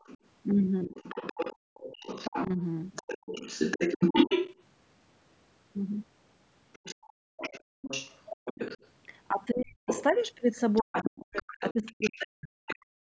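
The echo canceller likely fell short from the start, so the other side's voice leaking through runs from 0.0 to 4.62 s. A second talker sits only about 5 dB under the main speech, competing with it rather than hiding beneath it.

Inside that stretch the canceller likely twice mistakes the near talker for echo, which is speech suppressed in double talk. At 0.87 to 0.95 s the voice dips by about 10 dB for a brief moment. From 2.47 to 3.39 s the cuts go much deeper, roughly 40 dB, chopping about 0.4 s of the voice into missing fragments while the far side talks.

Between those, from 1.56 to 1.74 s, the canceller clamps the microphone while the loudspeaker plays, so the background is gated by the echo canceller. The room tone falls away by about 34 dB for a fraction of a second, then snaps back.

Leakage returns from 6.73 to 12.75 s, likely the same incomplete cancellation, this time about 10 dB below the speech. 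It is fainter but still a separate voice.

The same gating hits again from 7.13 to 7.82 s, with a drop of about 33 dB. The background goes nearly silent for about half a second.

From 9.5 s to the end, double-talk suppression, likely from the same confusion, recurs at about 40 dB depth. Roughly two seconds of the talker's speech are pulled down or broken up under the far side. The call's normal microphone processing leaves nothing above 8 kHz throughout.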